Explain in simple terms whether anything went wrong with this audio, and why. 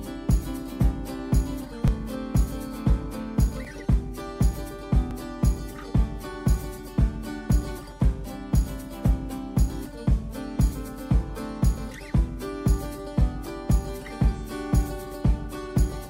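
Four small jumps in the sound, at 1.88, 3.65, 5.11 and 9.86 s, likely dropped buffers (overrun): a tiny slice is lost and skipped, not replaced by a silent gap.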